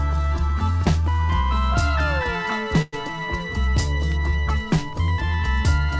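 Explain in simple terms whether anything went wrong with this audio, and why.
At 2.82 s a short fading buzz stretches the sound for about 0.11 s, then it carries on intact. This is a call audio freeze, likely from delayed packets.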